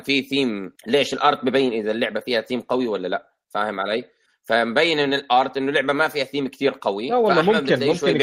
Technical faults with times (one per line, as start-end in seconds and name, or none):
none